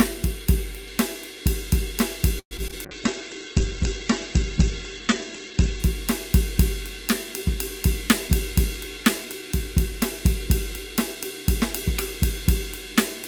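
From 2.39 to 2.74 s the music turns choppy and robotic, with pieces missing. This is repeated packet loss: four gaps, the longest 116 ms, patched by stretching the previous sound over about 42% of that span.

From 2.76 to 4.00 s the music drags slightly, playing at 96% speed without any change in pitch. This is a jitter buffer slow-down, in which the receiver repeated small slices to add 58 ms of reserve.

From 2.86 to 5.88 s the sound becomes rough, watery and muffled. This is a call bitrate drop from 48 to 10 kbps, which narrowed the bandwidth from 20 kHz to 8 kHz for 2.89 s.

From 7.94 to 11.16 s the music runs at 104% speed at the same pitch, and the tempo loses its steadiness. This is a jitter buffer speed-up, which trimmed about a tenth of a second of audio to shrink the delay.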